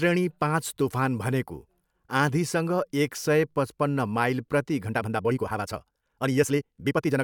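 From 4.84 s to the end at 7.23 s, just after "सय पचपन्न माइल प्रति", the speech suddenly rushes ahead, unchanged in pitch. This is a time-stretched section, likely squeezed to about 1.74 times speed by dropping short slices while holding pitch.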